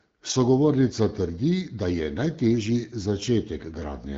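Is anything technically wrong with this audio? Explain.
Yes. There are AMR bit errors from 3.58 to 3.81 s, which fits about ten damaged 20 ms frames over this AMR-WB HD Voice speech. A few percent of the weaker-protected bits arrived flipped. Pulse positions, pitch, gain and spectrum values decode wrong. The speech keeps its rough pitch and level but turns hoarse, scratchy and gargly.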